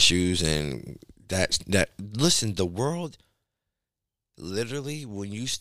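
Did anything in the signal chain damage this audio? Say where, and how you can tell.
Yes. Zipper noise enters at the driver or buffer stage. From 2.02 to 3.09 s, just after "and that that", the level falls by roughly 10 dB in about forty unsmoothed steps a second, which ticks audibly. The waveform envelope shows a staircase, and a spectrogram shows faint, evenly spaced vertical click lines.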